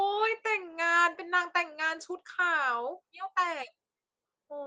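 Speech carried over a WebRTC call path with its codec band limit near 12 kHz, and no technical faults are present.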